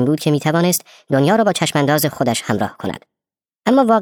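Speech throughout runs too fast and too high, about 1.38 times normal speed and 5.55 semitones up: a wrong sample rate, recorded at 32 kHz but played at 44.1 kHz without conversion.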